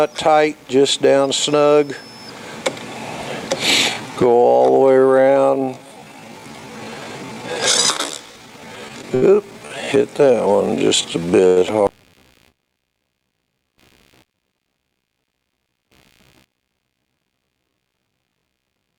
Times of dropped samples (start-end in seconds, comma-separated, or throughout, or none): none